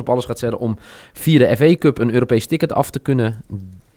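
No technical faults can be heard in this speech.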